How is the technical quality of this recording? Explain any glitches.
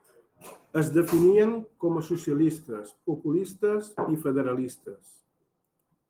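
No glitches to report; the recording shows no technical faults, and the speech carries only the light, full-band character of Opus voice compression.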